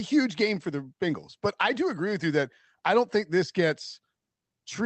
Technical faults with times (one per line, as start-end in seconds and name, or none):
none